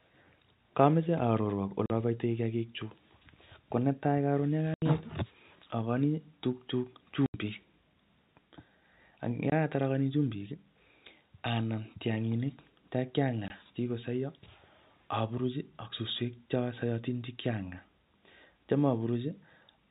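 The speech drops out at 1.86–1.90 s, 4.74–4.82 s, 7.26–7.34 s, 9.50–9.52 s and 13.48–13.50 s. This is packet loss filled with silence: the receiver inserted digital silence for missing packets. The holes last 40, 80, 80, 20 and 20 ms, all multiples of 20 ms, which fits 20 ms packets. Each gap starts and ends abruptly within the telephone-band G.711 audio.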